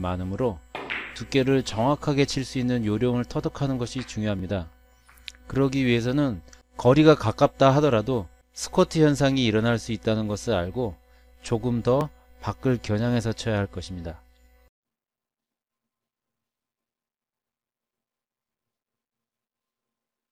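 At 4.39 s and again at 12.01 s, a block of digital silence about 1.45 ms long drops into the sound, consistent with a 64-sample buffer left unfilled. The abrupt cut to zero and back produces a brief tick rather than an audible gap.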